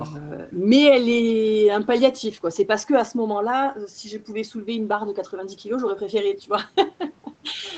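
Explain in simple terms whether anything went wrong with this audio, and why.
Nothing went wrong with this speech recording. It sounds like a normal online call: the microphone processing trims the deepest bass, and the call codec leaves nothing above about 8 kHz, so the sound is a little less bright than a studio recording.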